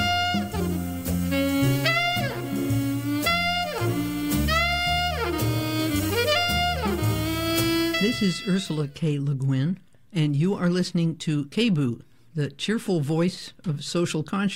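Clock slip clicks run from 0.11 s to 14.47 s as a steady stream of faint ticks, roughly every 0.15 s, about a hundred in all. The likely cause is two devices running on separate, unsynchronised clocks that disagree by something around 150 parts per million, so a single sample is dropped or repeated each time the drift adds up to a whole sample.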